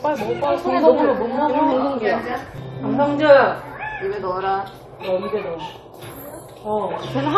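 A recording of sounds skips ahead abruptly at 0.44, 1.72, 2.58 and 4.85 s, with no gap of silence. Each is likely a dropped buffer (overrun), where a short stretch, about 20 ms and about 70 ms at 2.58 s, was lost and the edges joined.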